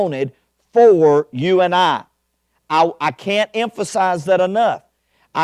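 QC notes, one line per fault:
No audible faults found.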